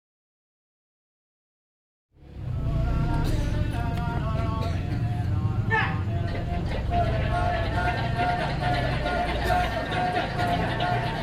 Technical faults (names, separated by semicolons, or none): none